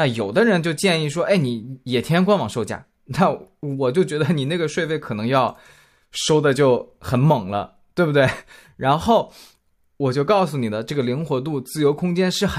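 No technical faults can be heard anywhere in this speech recording. Nothing in it points to a problem in how the audio was captured, processed or delivered.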